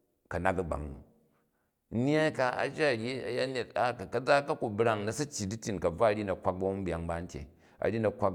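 No technical faults can be heard anywhere in this speech recording.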